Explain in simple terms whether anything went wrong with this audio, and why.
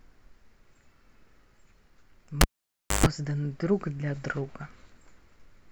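At 2.41 seconds the speech cuts out with a pop. This is a cable pulled and plugged in while the signal was live. For about 0.6 seconds almost nothing comes through, because the connection is broken. Just before the sound returns there is a short buzz, about 0.13 seconds long, at the 50 Hz mains frequency. That happens when only the tip of the plug touches and picks up electrical hum. A second pop at 3.06 seconds marks the cable seating fully.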